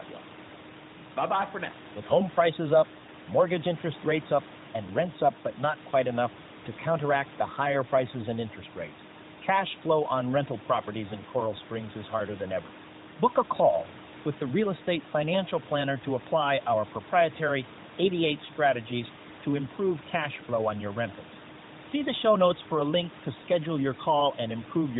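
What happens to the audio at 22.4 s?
Nothing goes wrong at 22.4 s; the audio is intact at that moment.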